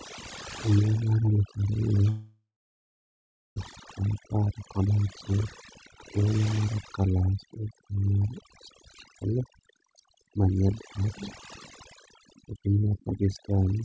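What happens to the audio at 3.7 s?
Right around 3.72 s a jitter buffer speed-up kicks in and runs until 7.16 s, ending just before "egweng mar chitral". The audio plays about 13% fast while the pitch stays put, so it sounds rushed. After the gap just before this, the receiver was holding extra audio. To catch up it kept snipping out tiny pieces a pitch period or so long, trimming about half a second in total.

That gap runs from 2.10 to 3.60 s and is a long network dropout, likely the reason the buffer overfilled. The last sound gets stretched into a fading buzz or hiss, then there's about a second of silence. Roughly a second of audio is simply gone when the sound resumes.

Overdone noise removal is present here too, as it is through the whole clip. The denoiser was set so aggressively that it pulls individual frequency bands right down whenever they sit near its noise estimate. That leaves the background lowered and broken up into little twinkling specks, and the voice's quieter parts get removed along with the noise.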